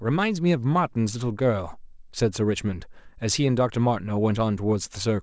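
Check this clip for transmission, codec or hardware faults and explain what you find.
Nothing stood out on listening to this speech clip, which carries the band limit of its call path through a G.722 codec at 64 kbps, with nothing above 8 kHz.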